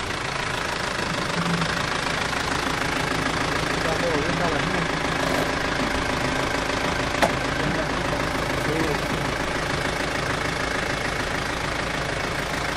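Nothing technically wrong turns up in this recording of sounds; it just runs along as it should, with nothing to flag.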